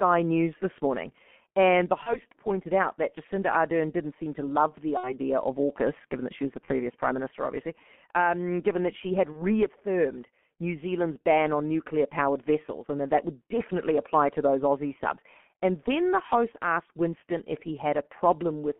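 The speech runs through a G.723.1 codec at 6.3 kbit/s throughout, confined to a 200 Hz to 3.4 kHz line band. Its coarse 30 ms frames and slow model updates leave the voice heavily muffled and hoarse, with smeared consonants.

VoIP packet loss concealed by the speech codec occurs at 2.03 to 2.21 s, after "seem to love the" at 4.97 to 5.13 s, between "that she was the" and "prime minister obviously um" at 6.65 to 6.70 s, and after "given that she had" at 9.32 to 9.44 s. The gaps fit a single 30 ms frame each time, except at 4.97 s, where about 60 ms fits two. The decoder bridges each gap by repeating its last pitch and filter at falling gain. That produces a brief buzzy or noisy smear that fades, and the voice stays weak for a moment after real audio resumes.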